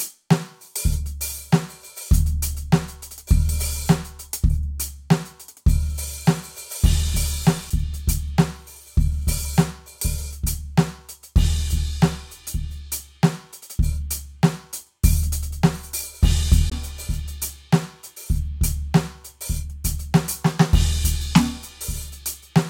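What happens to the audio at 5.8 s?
Nothing goes wrong at 5.8 s; the music plays through that moment intact, with no audible fault.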